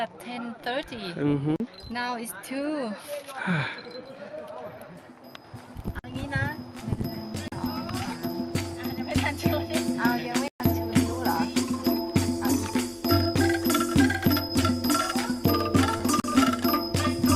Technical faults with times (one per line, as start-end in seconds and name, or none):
1.56-1.60 block of digital silence
5.99-6.04 block of digital silence
7.48-7.52 block of digital silence
10.48-10.60 block of digital silence
15.97-16.01 short concealed packet loss
16.20-16.24 block of digital silence